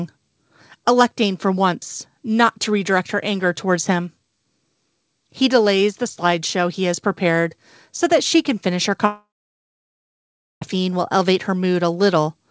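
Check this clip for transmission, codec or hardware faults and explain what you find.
One transmission fault is audible in this speech clip, heard through a G.722 call path whose band stops at 8 kHz.

Long network dropout, 9.06 to 10.63 s: after "she can finish her", the receiver stretches the last sound into a brief fading buzz, which gives way to about 1.4 s of near silence. Speech returns at "will elevate", with roughly 1.56 s permanently missing. The likely cause is audio packets that never arrived.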